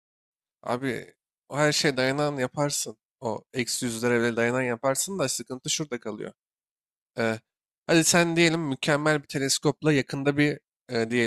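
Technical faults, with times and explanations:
Nothing's wrong here; the speech simply eases in with a gentle fade that's done by about 0.31 s, just as an editor would shape it.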